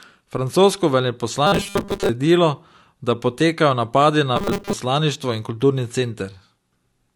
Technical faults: robotic sound from repeated short buffers

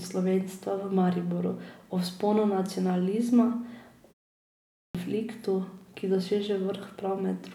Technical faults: clipped start after a pause

